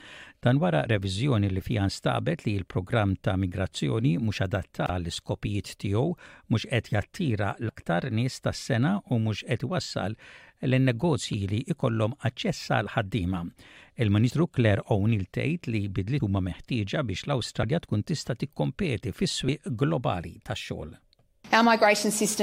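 Compressed frames are skipped eight times, at 0.85–0.87, 4.86–4.90, 7.68–7.70, 11.31–11.34, 14.29, 16.19, 17.62 and 19.48 s. Each time the audio jumps ahead, losing around 20 ms up to around 150 ms, because whole coded frames were missing or rejected as damaged. A waveform shows an abrupt change in envelope, and a spectrogram shows a brief vertical smudge where the patterns fail to continue.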